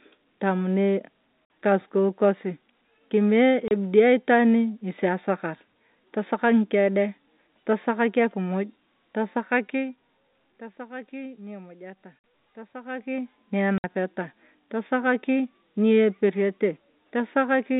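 Packet loss filled with silence cuts the speech at 1.45 s for 50 ms, 3.68 s for 30 ms, 12.19 s for 50 ms and 13.78 s for 60 ms. Lost packets were replaced by dead silence, so each gap, sized like 10 ms packets, drops out abruptly with hard edges.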